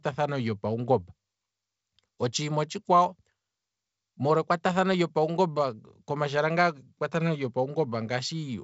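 Speech recording with no technical faults to report.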